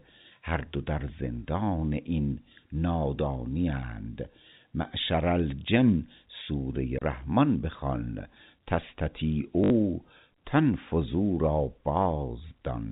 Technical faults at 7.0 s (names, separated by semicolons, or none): CD skip